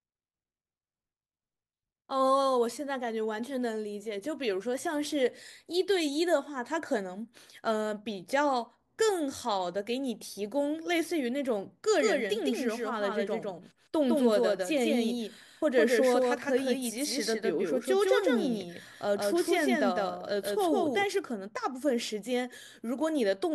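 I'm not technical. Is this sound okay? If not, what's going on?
No, not quite. From about 11.99 to 21.05 seconds there's a doubled audio track: the speech plays twice, with a second copy just as loud trailing about a sixth of a second behind, likely from it being recorded a second time through a slower path.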